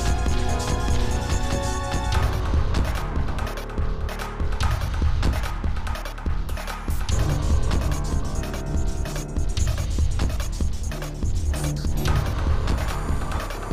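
Nothing here gets in the way: no dropouts, glitches or distortion come through anywhere in the clip.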